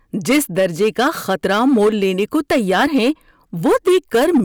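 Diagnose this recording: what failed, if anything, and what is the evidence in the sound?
Hard clipping runs through the whole speech clip: every loud syllable carries a harsh, fuzzy edge. The level was driven about 9 dB past what a converter or sample-format stage could pass, flattening peaks on roughly 7 percent of samples and spraying high harmonics.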